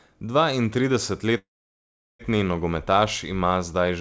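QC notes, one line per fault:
1.38 to 2.21 s, call audio freeze: the last sound stretches into a short fading buzz, then drops to about 0.75 s of silence before the speech picks up exactly where it stopped, with nothing skipped. This is likely a jitter buffer running dry while packets were held up. The receiver padded 815 ms, so everything afterwards plays that much later. The 8 kHz top of the G.722 call path carries through the resumed audio unchanged.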